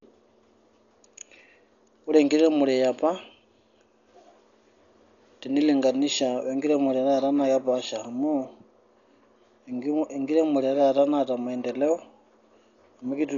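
From start to finish the speech is dull and band-limited, with nothing above 7 kHz, and a rough, fluttering noise clings to the voiced sounds. The damage is heavy and most likely comes from Dolby Digital compression at a starved rate, consistent with about 48 kbps. At that rate the encoder narrows the band and leaves many frequency lines without mantissa bits, so the decoder fills them with dither noise, producing the grainy texture around tones.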